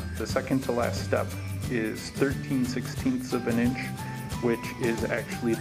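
Nothing stood out on listening to the clip.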